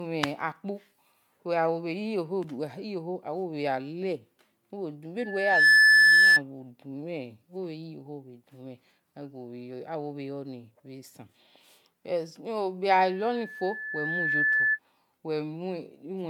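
Throughout the speech, the sound has likely been through repeated MP3 encoding at 128 kbit/s, around seven passes, each requantising on a shifted frame grid. This generation loss leaves it swirly, smeared and hollow, with blurred attacks and nothing above 20 kHz.

From 5.18 to 6.42 s, a microphone picks up its own loudspeaker and the loop's gain exceeds one at 1.7 kHz, producing a loudspeaker feedback squeal. The tone swells over about half a second to roughly 15 dB above the speech. The same 1.7 kHz loop returns from 13.05 to 14.79 s. It builds more slowly, over about one and a half seconds, and peaks lower, at roughly 10 dB above the speech.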